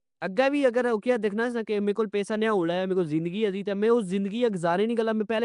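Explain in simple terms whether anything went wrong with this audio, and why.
Nellymoser compression runs through the whole recording, from the first second to the last. The speech has a rough, hissy haze around it and a smeared, underwater quality, and nothing is heard above about 10.6 kHz. The likely cause is the old Flash microphone codec, which squeezes sound into small chunks with very few bits. Weaker frequency bands of the sound get no bits at all and are replaced with noise, which creates that fizzy halo.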